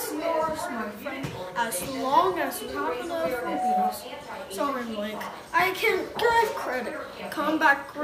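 A loudspeaker feedback squeal runs from 3.33 s to 4.01 s. A single tone at 742 Hz swells out of the audio over roughly a third of a second and then sits about 5 dB above the rest of the sound until it stops. The microphone was picking up the loudspeaker it was feeding, and at 742 Hz the gain around that loop exceeded one, so the tone fed on itself.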